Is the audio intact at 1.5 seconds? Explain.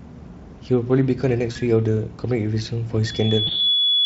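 No. From 1.51 to 1.59 s the sound smears into a buzzy tone or coloured noise that fades, then sounds weak as it recovers. This is VoIP packet loss concealed by the speech codec: about 40 ms went missing, which fits two lost frames, and the decoder stretched its last pitch and filter at falling gain.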